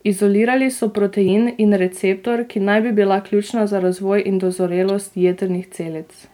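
Speech clip in which damaged data in the compressed stream makes the decoder lose sync and search for the next valid frame, producing brief glitches at 1.24 to 1.28 s, just before "in receptor ki naj", and again at 4.89 s.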